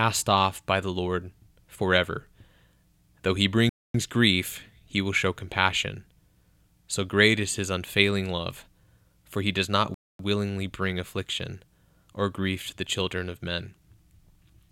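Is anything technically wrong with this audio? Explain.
Yes. At 3.69 to 3.94 s and again at 9.94 to 10.19 s the speech stops dead for 250 ms, then resumes where it left off. This is a gap between chunks: the audio was delivered in 6-second chunks, and silence was inserted at each join rather than any speech being removed. The two holes fall about 6.25 s apart, matching a 6 s chunk plus the 250 ms gap.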